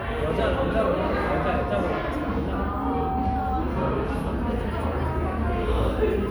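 From 2.55 s to 3.82 s a single steady tone at 765 Hz rises out of the sound, swelling over about half a second until it sits roughly as loud as everything else. This is loudspeaker feedback squeal. A microphone was picking up the loudspeaker it was driving, and at 765 Hz the loop gain exceeded one. The tone fed itself and grew.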